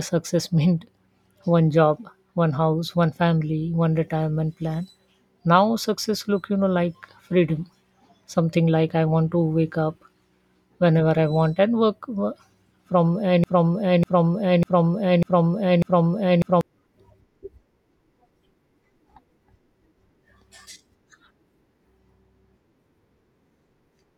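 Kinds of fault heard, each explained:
Broken-record loop: from about 13.44 s to 16.61 s the speech stops moving forward and a single fragment of roughly 0.6 s plays over and over, exactly the same each time, five times back to back, before things pick up again. That's the classic stuck-buffer sound, most likely the player, encoder or stream stalling and resending the last chunk it had, so whatever should have played in those three seconds is simply gone.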